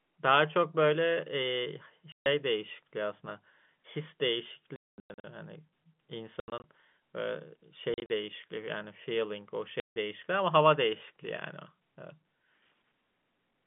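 Packet loss filled with silence cuts the speech at 2.12–2.26 s, 4.76–5.24 s, 6.4–6.64 s, 7.94–8.1 s and 9.8–9.96 s. Packets went missing and the receiver played silence in their place, so the telephone-band sound (about 150 Hz to 3.5 kHz) drops out abruptly, with hard edges. The holes come in steps that fit 20 ms packets. The stretch starting at 4.76 s is broken into several holes, the longest lasting 220 ms.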